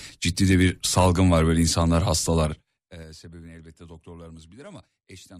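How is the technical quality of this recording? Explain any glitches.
The recording has one glitch, a burst of zipper noise. It runs from 2.42 to 3.07 s, right after "salgın var böyle insanlar" and before "sebebini elbette". The level falls by roughly 25 dB there. The fall is made in 3 dB jumps, about ten each second, with no smoothing between them. Each jump leaves a small click. Together the clicks sound like a ticking zip riding on the speech as it fades down.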